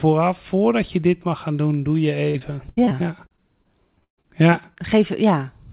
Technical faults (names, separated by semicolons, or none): repeated packet loss (robotic sound)